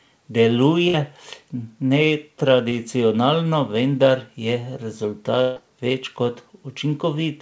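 At about 0.88 s there's a burst of packet loss. Roughly 60 ms of speech never arrived in time, so the receiver kept the last sound going for about 56 ms, fading it as a held buzz or hiss until 0.95 s, then jumped ahead.

Around 2.69 s comes a short concealed packet loss. About 20 ms went missing and was patched by briefly continuing the preceding sound, so you get a quick smear or wobble before it blends back into the real audio.

At 5.42 s the burst of packet loss returns, and this one's bigger. About 140 ms is lost and filled with a fading continuation until 5.58 s, and whatever was said in between is simply gone.

Throughout, the call codec leaves nothing above 8 kHz, which fits a G.722 wideband link.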